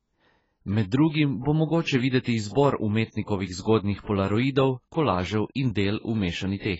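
AAC compression throughout: speech is dull and smeared, with nothing above 7.7 kHz, likely from heavy AAC-LC coding at a rate that fits about 16 kbps.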